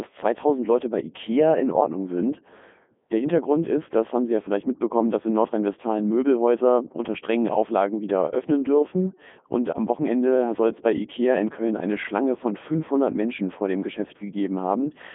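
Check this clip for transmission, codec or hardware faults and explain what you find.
There's one codec fault running through the whole clip. A Codec 2 vocoder rebuilds the speech from sine waves, which sounds robotic and buzzy, band-limited to roughly 200 Hz–3.6 kHz, and the quality fits its 3.2 kbit/s mode.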